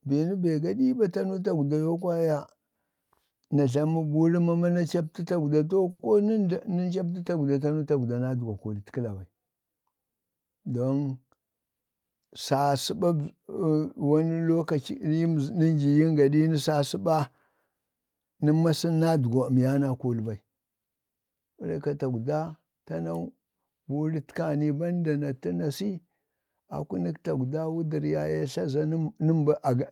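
At 5.91 s the speech hangs for a moment: one sound is held about 80 ms longer than it should be, with a faint buzzy, slightly dipped quality, and then continues from exactly where it stopped, with nothing skipped. This is a short stall from a late packet. The packet wasn't there when it was due, the jitter buffer ran dry, and the receiver stretched the last sound until it arrived at 6.01 s, adding roughly 80 ms of delay.

From 11.24 s to 11.84 s the speech sounds rushed, running about 14% faster while the pitch stays where it was. This is jitter buffer speed-up. The buffer held more audio than its target, so the receiver trimmed short slivers, each one or a few pitch periods long, over and over in quick succession. Altogether around a tenth of a second was cut to bring the delay back down.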